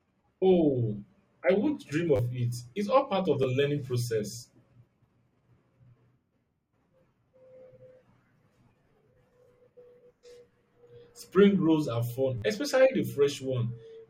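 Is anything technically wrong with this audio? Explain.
Yes. There are three repeated-buffer faults in this speech. They occur at 2.16–2.19 s after "I won't dream", at 3.43 s between "all part of the" and "learning process", and at 12.38–12.42 s between "rolls are fun" and "especially the". Each time, fresh audio arrived late, so the player reissued the last short block, consistent with a 10 ms buffer. The block plays an extra three, one and four times, which drops roughly 30, 10 and 40 ms of speech. These are heard as brief buzzy stutters. The waveform shows identical 10 ms cycles with abrupt joins, and the spectrogram shows narrow vertical seams and 100 Hz comb striping.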